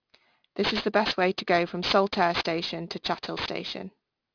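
Right from the start and all the way through, there's aliasing on this speech. It sounds like the audio was dropped to a much lower sample rate, something like 11 kHz, with no filter first, so everything above the 5.5 kHz fold point got mirrored back down as wrong, unrelated pitches. The folded energy is loud, not far below the speech itself, which makes the sibilants gritty and metallic, and the spectrum runs hard right up to the band edge.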